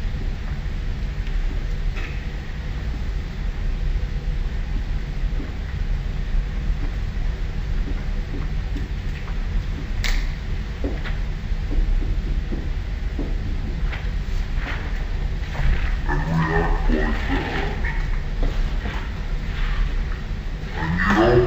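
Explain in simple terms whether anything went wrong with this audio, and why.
Something went wrong for the whole clip, from start to finish: a stereo read as mono fault. A stereo file stores left and right samples alternately, and here the player treated that alternating stream as one channel. Every pair of samples plays as two moments in time, so the sound runs at half speed (0.5×) and sits a full octave low (12 semitones down). A faint, high-pitched mirror of the sound rides above it.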